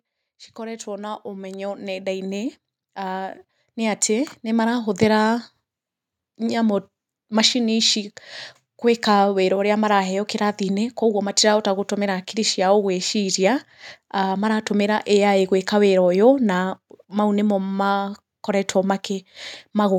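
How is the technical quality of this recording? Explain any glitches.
The recording has one clear technical fault near the start.

Automatic gain rising, from 0.56 s to 4.94 s: the automatic gain control judged the input too quiet and kept raising its gain, by about 16 dB in total. The speech and the background noise swell upward together over those four seconds.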